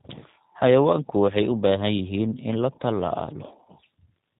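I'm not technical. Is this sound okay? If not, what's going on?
No. Throughout, the speech has G.729 codec damage: a low-rate phone-call compression that sounds muffled and rough, with a buzzy, synthetic edge rather than the clean dullness of a plain phone line.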